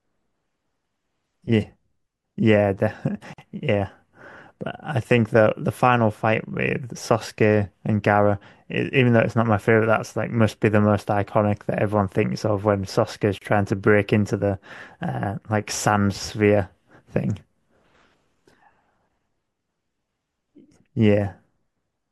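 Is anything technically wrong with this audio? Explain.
Yes. The speech was encoded as separate pieces, apparently every 10 s, and joined without trimming encoder delay and end padding. The result is a gap at a join of encoded pieces: silences of 49 ms at 3.33 s and 31 ms at 13.38 s, with smeared edges, after which the speech resumes where it stopped.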